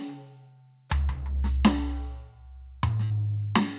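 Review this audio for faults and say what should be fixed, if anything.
Burst of packet loss at 3.04 to 3.12 s: the music's last sound is stretched and faded for 60 ms, then resumes 60 ms further on, skipping that span. Adding forward error correction or a larger jitter buffer on the call path would help prevent this.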